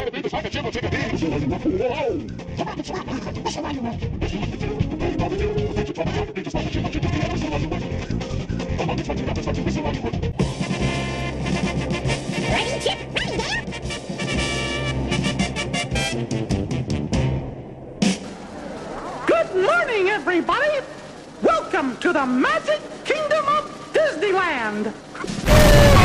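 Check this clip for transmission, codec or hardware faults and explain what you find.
Two faults are present: clock jitter across the whole clip, and comb filtering from a channel delay in the first part.

Periodic clock jitter runs throughout. Interference makes the converter's sampling clock wobble at around 1 kHz, so every component of the sound gains sidebands about 1 kHz above and below it, more strongly at higher frequencies. The result is a rough, metallic edge that disappears in silences.

Channel delay (comb filtering) runs from 0.0 to 18.2 s. One channel arrives roughly 0.4 ms late, and when the two are summed to mono, the shared content cancels at evenly spaced frequencies starting near 1.5 kHz. These fixed notches give a hollow, phasey colour.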